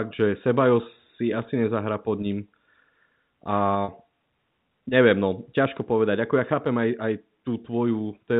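At 3.84 s the speech briefly sticks: for about 40 ms, ending near 3.88 s, a slightly held, buzzy tone replaces what should be there before the speech carries on. This is packet loss with pitch repetition. Audio went missing, a gap that fits two 20 ms packets, and the receiver covered it by repeating the last pitch period of the voice, which yields that short, frozen buzz. The band stops at 4 kHz, as the G.711 telephone coding on this line implies.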